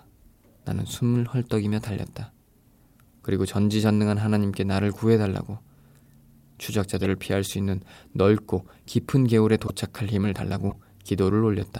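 Brief chirpy noise bursts at 6.97–7.01, 9.67–9.70 and 10.70–10.75 s are corrupt frames decoded: damaged compressed data was played, spraying energy at wrong frequencies.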